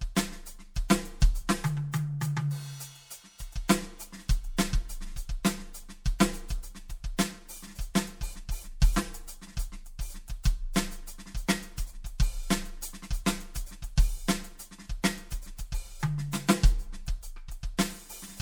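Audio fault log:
throughout, channel delay (comb filtering): one channel lags around 5 ms before the mono sum, cutting fixed notches from about 100 Hz upward, so the music sounds hollow and phasey.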